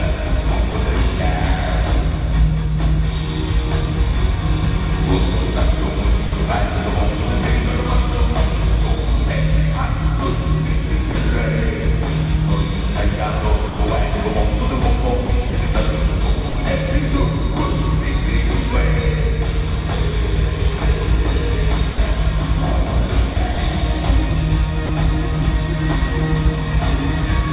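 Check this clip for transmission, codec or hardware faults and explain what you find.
Two kinds of voice-detector fault turn up, heard through a call path with nothing above 4 kHz, which fits a G.711 A-law codec.

Sound dropped by the voice detector: at 0.71–0.74 s, 6.26–6.32 s, 11.12–11.15 s and 13.67–13.79 s, the sound briefly gives way to steady synthetic noise for 30 to 120 ms. The sender's detector likely judged those moments as background and stopped sending, so the receiver filled the gaps with comfort noise.

Sound chopped by the voice detector: across 15.26–16.55 s, 20.78–21.98 s and 23.33–24.89 s, the sound turns choppy, with two or more holes filled by comfort noise. About 120 ms, 90 ms and 90 ms are lost in total, most likely from the detector switching on and off repeatedly.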